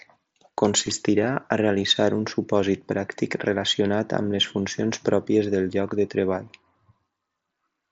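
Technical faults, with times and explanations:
0.87 s, concealed Bluetooth headset packet loss: a gap of about 7.5 ms, consistent with a single lost packet on the link between headset and phone, is filled by the receiver repeating the best-matching stretch of the preceding waveform. Because the patch is one short piece cut from the audio just heard and the real signal resumes almost at once, it blends in and is nearly hidden. The surrounding audio still carries the slight graininess of the mSBC headset codec.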